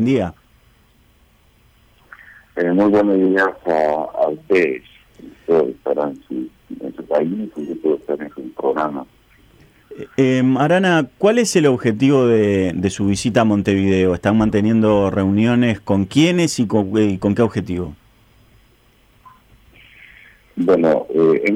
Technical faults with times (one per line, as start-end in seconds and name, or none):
8.73 dropped samples